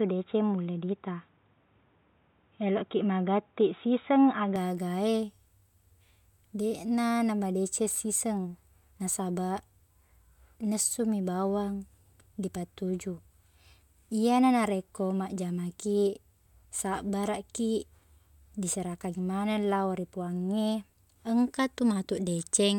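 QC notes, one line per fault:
0.00–4.56 s, input switched to a poorer device: speech sounds dull and boxy, with nothing above 3.8 kHz and faint noise about 45 dB down, likely a narrower-band input. Full bandwidth returns at 4.56 s without a gap. The spectrogram shows a flat ceiling lifting abruptly, and the waveform level barely changes.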